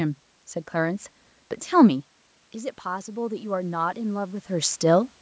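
Automatic gain rising from 2.54 to 4.77 s: after input fell about 10 dB, gain creeps up about 4 dB, swelling voice and room noise.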